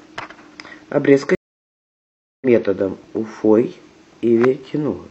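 At 1.35 s a stream reconnect cuts the speech for about 1.06 s, resuming around 0.7 s further on, so unlike a plain dropout, material is skipped rather than paused.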